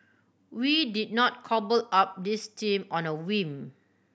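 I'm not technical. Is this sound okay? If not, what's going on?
Yes, nothing in this recording stood out as a problem when I listened to it.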